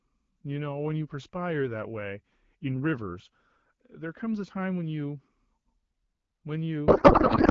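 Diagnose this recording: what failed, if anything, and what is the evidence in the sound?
At the codec stage, a payload misread: octet-aligned AMR-WB frames decoded as bandwidth-efficient put fields in the wrong places, so from 6.88 s to the end speech becomes garbled, warbling noise.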